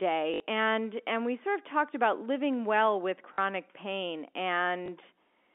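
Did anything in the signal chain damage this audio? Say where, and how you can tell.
Yes, at the network stage: packet loss with last packet repeated, in three places. From 0.34 to 0.40 s, just before "and and we sort", about 60 ms went missing, which fits three 20 ms packets. From 3.34 to 3.38 s, just after "about living well with", 40 ms was lost. From 4.86 to 4.88 s, a single 20 ms gap. The receiver filled each hole by replaying the last packet it had, so the longer runs come out as a brief robotic stutter and the single one as a small blip. The G.711 telephone coding, with its 250 Hz to 3.5 kHz line band, isn't part of this fault.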